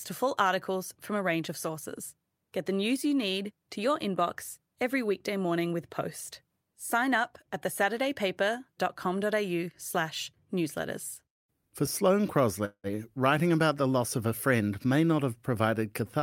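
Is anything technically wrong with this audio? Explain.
Yes, there are two network faults in this speech clip.

At about 11.29 to 11.35 s, just after "slash newsletters", there is a short stall from a late packet. One packet missed its playout slot and the jitter buffer drained, so the receiver held the final sound for about 30 ms until the packet turned up and playback resumed from the same point. Nothing is lost. That sound simply lingers a fraction too long, with a faint buzz or dip.

From about 12.65 to 12.87 s, just before "writing about the loss", there is a call audio freeze, likely caused by a run of packets delayed in transit that left the jitter buffer empty. The receiver extended the last sound for about 187 ms as a decaying buzz or hiss, ending in roughly 70 ms of silence. When the packets arrived, playback carried on from where it stopped, so a gap was inserted and nothing is missing.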